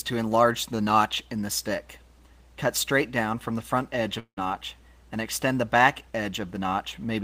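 From 4.19 to 4.39 s, a long network dropout likely removes about 180 ms of sound. The receiver stretches the last sound into a fading buzz, then about 80 ms of silence. The spectrogram shows smeared, decaying bands, then a blank column before the waveform resumes.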